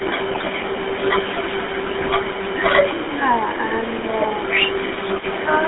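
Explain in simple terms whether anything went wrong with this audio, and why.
Several things went wrong. The whole clip went through the GSM full-rate codec, an old mobile phone codec. It strips the highs and lows, leaving the voice thin, buzzy and gravelly.

An echo leak runs from 0.0 to 0.96 s, 1.48 to 2.61 s, 2.83 to 4.49 s, and 4.7 to 5.45 s. A faint copy of the voice trails about a quarter second behind. The likely cause is a speakerphone echo canceller letting some sound through.

GSM bit errors hit at 0.31 to 0.43 s and 2.0 to 2.16 s. Damaged data from a weak signal makes the voice squawk, pop and gargle briefly.

Speech suppressed in double talk appears between 3.57 and 3.7 s. The voice dips slightly for a split second, likely because the echo canceller turned it down while both sides spoke.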